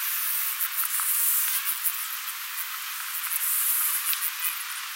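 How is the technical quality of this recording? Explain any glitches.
The technical quality is poor because of one fault that lasts the whole recording: a wrong sample rate. The audio is being played back at a much higher rate than it was captured at, with no conversion, which fits 16 kHz material played at 44.1 kHz. As a result, everything runs 2.76 times too fast and sits 17.6 semitones higher, so the sound is squeezed, shrill and hurried from start to finish.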